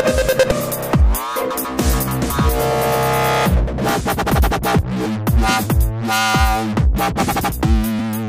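Damaged data in a compressed stream hits three times, at 2.30 to 2.32 s, 4.79 to 4.81 s and 7.99 to 8.01 s. At each point part of the encoded stream is wrong, so the decoder cannot parse those frames, loses sync and hunts for the next valid frame header. Each lasts about 20 ms and comes through as a chirp, squawk, click or short hole.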